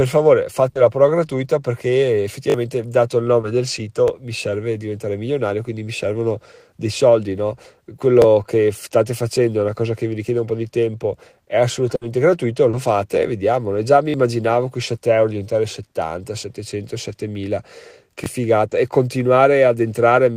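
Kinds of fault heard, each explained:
Burst of packet loss: about 60 ms of speech was lost or arrived too late, so the receiver stretched and faded the last sound; heard near 0.69 and 11.95 s.
Repeated buffer: audio ran late, so the device replayed its 20 ms buffer once or twice, giving short stutters and hard joins at 2.50, 4.08, 8.22, 14.10 and 18.24 s.
Short concealed packet loss: 20 ms of speech never reached the decoder, and the gap was filled from preceding sound, leaving a brief smear or wobble near 3.41, 12.71 and 18.69 s.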